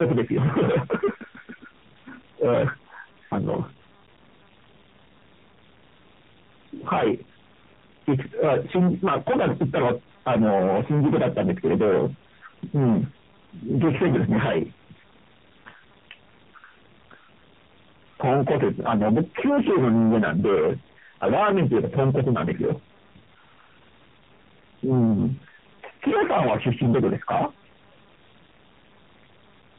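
From start to finish the speech is driven about 25 dB past full scale, so hard clipping cuts the peaks flat on roughly a sixth of the samples. Unlike soft saturation's gentle thickening, the squared-off tops spray high harmonics, giving a harsh buzzing fuzz on every loud syllable.

Throughout, tandem speech coding is also heard. Nothing reaches above 3.8 kHz, and the speech is muffled, rough and warbly, more degraded than a single narrowband codec would leave it. This fits two speech coders in a row, such as G.729A and then AMR-NB, the second recoding the first's artefacts.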